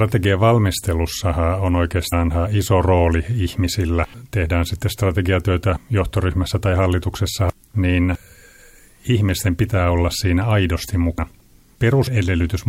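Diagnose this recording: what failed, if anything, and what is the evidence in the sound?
Codec stage: compressed frames skipped at 2.12 s, between "valmistelussahan on" and "iso rooli ihmisillä". Roughly four frames of about 23 ms each, around a tenth of a second, never play.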